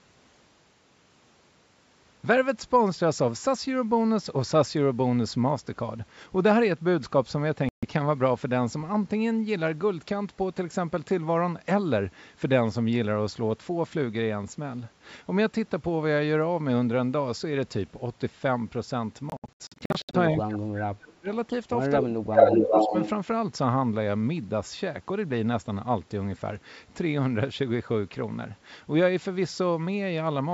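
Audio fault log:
7.69–7.85 s and 19.30–20.15 s, Bluetooth dropout: audio packets likely failed to reach the headphones in time and were discarded. The first leaves a single 0.14 s hole. The second scatters about 0.44 s of silence across 0.84 s, the longest gap near 70 ms. Sound resumes further on, as if it had kept playing.
20.38–21.29 s and 22.01–22.94 s, speech suppressed in double talk: with both sides talking at once, the echo canceller likely could not tell the local talker from loudspeaker echo and attenuated everything. The speech sinks by up to about 30 dB, roughly 0.7 s in each stretch.
22.34–23.10 s, echo leak: one side on loudspeaker likely let part of its microphone pickup slip past its echo canceller and return down the line. A copy of the speech arrives about 0.4 s late, roughly 5 dB above the original, overlapping the second suppressed stretch.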